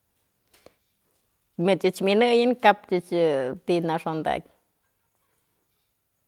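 Listening closely to the speech, nothing stood out as a technical fault at any point.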